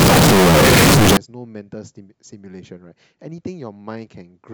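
A speech clip whose first 1.17 s, from 0.0 s, is a harsh, very loud distortion in which quiet moments are as loud as the rest, likely signed and unsigned mixed up in 16-bit samples. Unlike ordinary clipping, even near-silent sound jumps across the whole range.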